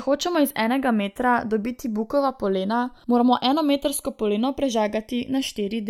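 Channels drifting apart throughout: channel clocks differ by roughly 70 ppm, so the offset creeps toward roughly 0.4 ms, giving slow flanging in mono.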